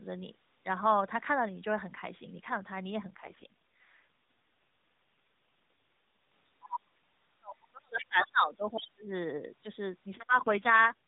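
At 6.72 to 6.79 s a brief scrap of the other side's voice leaks through, about 10 dB below the talker. This is likely residual loudspeaker echo that the echo canceller failed to remove. It is a short burst. On a spectrogram it appears as a separate harmonic pattern that does not follow the main talker's contours.

From 6.89 to 9.1 s the talker's speech is suppressed in double talk. The canceller likely could not separate the near voice from the echo and pulled everything down, by as much as about 35 dB at the deepest point. Across roughly two seconds the voice dips, loses its top end or drops out in pieces. In the waveform the envelope caves in unevenly. All of this sits under the 4 kHz ceiling of the narrowband mobile codec.

Within that stretch the other side's voice leaks through twice more, at 8.1 to 8.31 s (about 20 dB down) and at 8.71 to 8.86 s (about 15 dB down). Both are faint fragments that show up as weak stray energy in the gaps.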